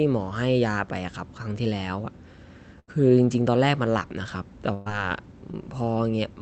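At 2.79 to 2.89 s and again at 4.73 to 4.88 s there's a burst of packet loss. Several packets in a row went missing, so the receiver stretched the last bit of sound, fading it into a held buzz or hiss. Then the speech picks up about 80 ms and 120 ms further along, with that stretch simply gone.

Around 5.52 to 5.55 s there's a short concealed packet loss, roughly 20 ms that never made it to the decoder. The receiver patched the hole by extending the preceding sound and blending back in, so you get a quick smear or wobble rather than a gap. The rest of the call path carries the usual Opus coding texture, with the top end cut off at 8 kHz.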